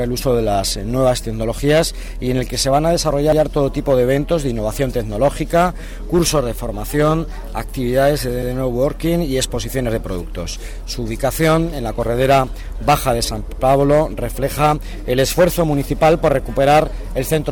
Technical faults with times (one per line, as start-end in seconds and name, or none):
3.32-3.42 overlapping chunks
8.42-8.52 overlapping chunks
13.52-13.62 overlapping chunks